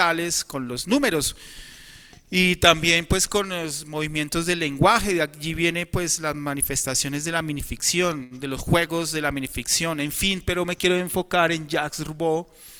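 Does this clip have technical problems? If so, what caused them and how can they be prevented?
Yes, there's a short stall from a late packet at 8.23 to 8.34 s. The jitter buffer ran dry, so the receiver held the last sound for about 72 ms until the packet arrived, then picked up where it left off. Nothing's lost, but that sound drags, and everything after sits 72 ms later. A deeper or adaptive jitter buffer would ride out that kind of late arrival.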